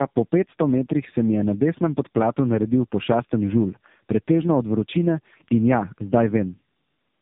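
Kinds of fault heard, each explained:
Tandem speech coding: the speech was decoded and re-encoded at link borders, so a second low-rate coder worked on the first coder's damage. Roughness and warble compound beyond what one narrowband codec alone gives, and nothing sounds above 3.8 kHz, which fits two AMR-NB passes.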